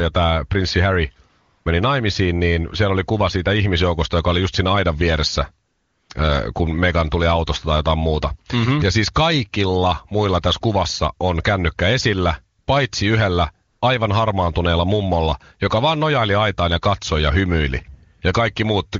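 From 0.0 to 3.77 s, de-emphasis was applied wrongly: a treble cut hit the audio, tilting 10 kHz about 8 dB below 1 kHz and leaving the speech dull and muffled. At 1.29 to 1.65 s, 5.67 to 6.09 s, 12.59 to 12.67 s, 13.69 to 13.81 s and 18.17 to 18.21 s, AMR comfort noise appears: speech frames stopped and the receiver synthesized steady, smooth noise that switches in and out in place of the real background.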